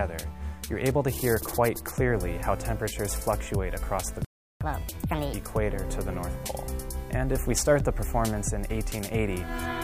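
At 4.25 s the audio drops into a playback stall: 0.36 s of flat silence in the waveform and a blank vertical band on the spectrogram, likely from the player running dry. From 4.61 to 5.33 s, catch-up at higher speed plays at 1.5x, pitch raised by about seven semitones, its harmonics visibly shifted upward and compressed in time.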